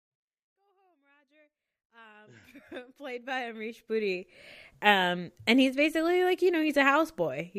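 No technical faults are audible.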